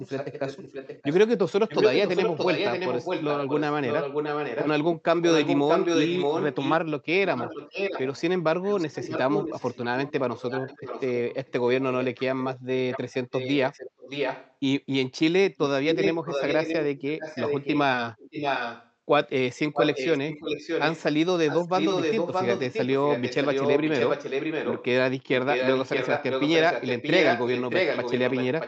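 Speech is shadowed by a delayed copy of itself trailing about 627 ms behind, at 0.02–4.67, 5.21–6.76, 7.36–14.54, 15.57–18.91, 19.73–24.86 and 25.49 s to the end. The copy is at times as loud as the original and faintest through 7.36–14.54 s. This echo leak is likely a far-end loudspeaker whose echo canceller let part of its microphone pickup through, back into the call.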